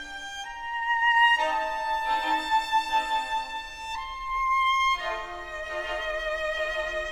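From 1.95 s to the end, the audio carries sample clock jitter. The converter's clock wanders by around a microsecond, so samples land slightly off time. That adds a fine hiss that tracks the signal, about 40 dB below it. It grows on loud, bright passages.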